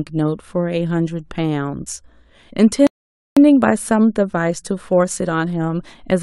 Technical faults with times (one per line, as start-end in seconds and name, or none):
2.87-3.37 rebuffering stall